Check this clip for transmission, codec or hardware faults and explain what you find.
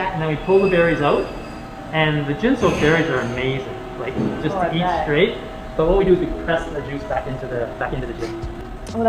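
One fault: a time-stretched section from 5.95 s to the end. The audio suddenly rushes ahead, running about 1.49 times faster with unchanged pitch. Software likely squeezed this stretch to fit a length, dropping short pieces to hold the pitch steady.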